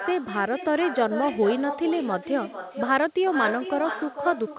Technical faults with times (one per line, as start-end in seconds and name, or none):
0.00-4.58 echo with no canceller